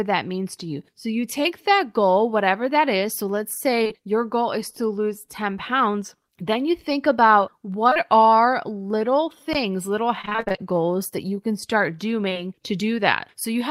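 A speech recording with three kinds of network and playback faults. Short concealed packet loss occurs at 3.83 to 3.91 s, 7.89 to 7.97 s and 12.29 to 12.37 s. Each time, two consecutive 20 ms blocks failed to arrive, and the decoder bridged roughly 40 ms by extending the preceding sound before fading back in, which gives a brief smear or wobble. At 9.53 s an underrun with held sample flattens the waveform for about 16 ms. The output buffer ran dry and the converter held its last value. Playback then resumed where it stopped with essentially nothing skipped, so the dropout is a soft gap with little click. From 10.21 to 10.60 s, repeated packet loss gives a robotic, choppy sound. Ten separate gaps, the longest 23 ms, left about half of that stretch patched by extrapolation, so synthetic continuations alternate rapidly with real audio.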